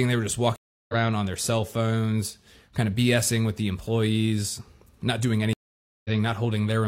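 Two stream reconnects occur. At 0.56 s, after "they were just", the audio drops out for 327 ms and resumes roughly 0.2 s further on at "on their cell phones". At 5.53 s, after "the employees not doing", a 515 ms silence ends with the audio skipping ahead by about 0.1 s. Each time the connection broke and a fresh decoder restarted mid-stream, losing that stretch of sound.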